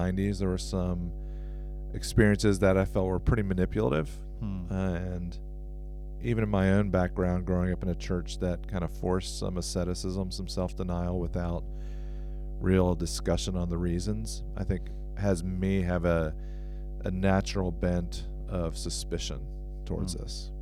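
Mains hum runs through this speech recording from start to finish as a steady 50 Hz tone with some low harmonics above it. It is strong, sitting only about 10 dB under the speech, so it fills every pause. The mechanism is power-line coupling: a ground loop between connected devices, or a transformer close to the cable or microphone, induces the 50 Hz supply frequency into the signal path, where it is recorded alongside the speech.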